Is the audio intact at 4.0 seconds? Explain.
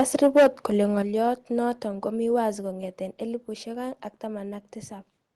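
Yes, the speech at 4.0 seconds comes through intact, with no dropout, glitch or other fault at that point.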